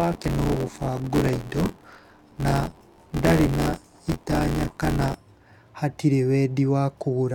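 From 0.0 to 5.1 s the speech carries buffer tearing: writer and playback pointers overlap each period, so roughly a fifth of every buffer replays audio about 20 ms stale. Hard joins produce a robotic 86.1 Hz buzz, which fits a 512-sample buffer.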